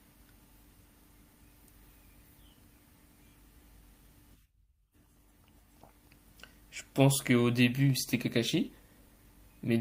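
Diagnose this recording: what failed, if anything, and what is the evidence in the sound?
Nothing in the recording points to a failure at any stage of the chain, from wiring and conversion through buffering, processing, transmission, storage and playback.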